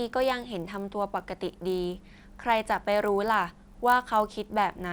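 Throughout the speech, a buzz at 50 Hz rides on the sound: the resampler restarted on every block. The 24 kHz to 48 kHz conversion treated each 20 ms block in isolation, so every block edge lacked its true neighbouring samples and carries a small error, fifty times a second. Unlike mains hum at the same rate, the buzz vanishes in pauses and appears only while speech is present.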